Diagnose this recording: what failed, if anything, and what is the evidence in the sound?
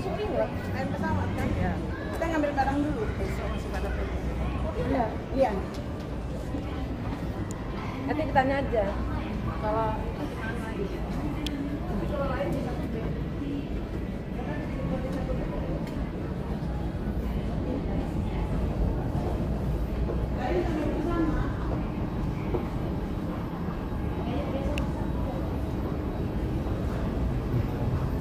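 Three sharp snaps sit on top of the sound, at 7.51 s, 11.47 s and 24.78 s. Each is a tight transient, only a few milliseconds long. The first peaks around -20 dBFS, the later two louder, around -15 dBFS. The stage is the analogue wiring. These are likely electrical switching spikes: a nearby switch, motor or static discharge arcs briefly, and the cable picks up that burst as a click added to the signal.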